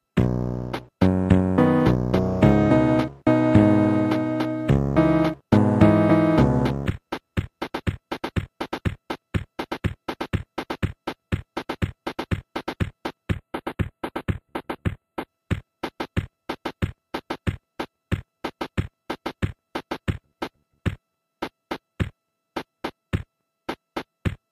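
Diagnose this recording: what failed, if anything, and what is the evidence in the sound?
From 13.33 to 15.28 s the sound turns hollow and dulled at the top, with fixed notches starting around 5 kHz. This is channel delay causing comb filtering: one channel lags by roughly a tenth of a millisecond, a few samples, before the mono sum, pointing to a driver or buffer misalignment.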